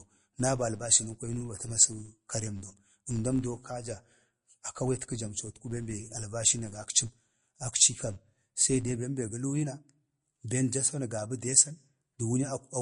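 Throughout the clip, nothing sounds above about 10.5 kHz. The speech sounds watery and swirly, and s sounds chirp. This is likely MP3 compression, which fits a low bitrate near 40 kbps.

From 0.0 to 8.97 s, a buzz at 100 Hz rides on the speech. A filter restarted on every block causes it. Each block starts with a tick that rises and falls with loudness.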